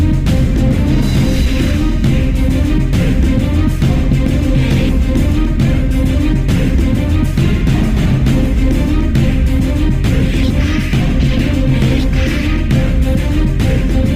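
At 3.42 s the adaptive stream drops to a lower bitrate after the connection slows, so codec artefacts suddenly rise, with no gap.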